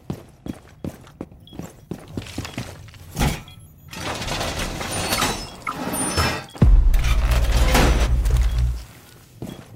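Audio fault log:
Nothing stood out on listening to the audio.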